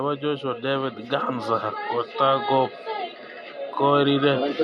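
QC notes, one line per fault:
0.19–2.77 s, automatic gain rising: the level climbs steadily by about 5 dB over roughly two and a half seconds as the gain control, judging the input too quiet, eases its gain upward. The background noise swells with the speech at the same rate, which separates it from a talker simply moving closer or speaking up. It is also a slow one-way ramp rather than the quick dip-and-recover breathing of compressor pumping.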